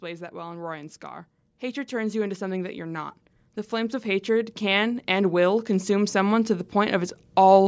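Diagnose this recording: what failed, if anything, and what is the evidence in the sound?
Automatic gain rising in the call processing stage. From 0.05 s to 7.63 s, speech and background noise swell together by about 15 dB. The automatic gain control judged the input too quiet and raised its gain slowly across the clip.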